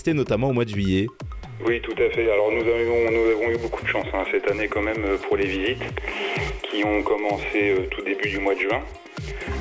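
No technical faults can be heard anywhere in this audio.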